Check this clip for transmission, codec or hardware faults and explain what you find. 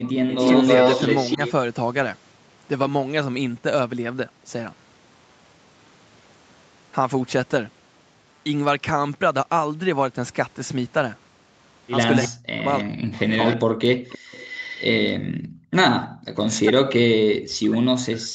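Three kinds of fault show up: an echo leak returning at several points, speech suppressed in double talk, and background gated by the echo canceller.

Echo leak, 0.06–1.52 s, 12.22–13.56 s, 14.09–14.85 s and 16.04–16.08 s: a copy of the speech returns 314 ms late. At first it is about as loud as the original, then roughly 10, 15 and 20 dB lower. The likely cause is a loudspeaker echo that the far-end canceller failed to remove. A spectrogram shows the same formant pattern repeated, shifted right by 314 ms.

Speech suppressed in double talk, 12.28–13.4 s and from 16.13 s to the end: while the echo overlaps the talker, the speech dips and breaks up, falling by around 40 dB at its deepest. The likely cause is a canceller that could not separate the talker from the echo and attenuated both. The waveform shows sudden notches in the envelope.

Background gated by the echo canceller, 14.19–14.3 s and 15.27–15.72 s: the room sound drops by about 40 dB, briefly and then for about half a second, before returning. 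The canceller clamped the microphone during loudspeaker playback. A spectrogram shows the noise floor going blank in vertical bands below the 8 kHz limit of the call path.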